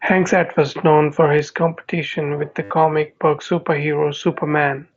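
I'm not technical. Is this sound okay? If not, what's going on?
No. This has concealed Bluetooth headset packet loss: small chunks of audio sent wirelessly from the headset to the phone never arrived, so the phone filled each gap by repeating a short piece of the sound just before it. At 1.39 s only a tiny moment was lost, and the patch is barely noticeable. From 2.64 to 2.71 s a longer stretch went missing, which comes out as a brief buzzy tone at steady loudness, with a slight wobble as the real speech returns.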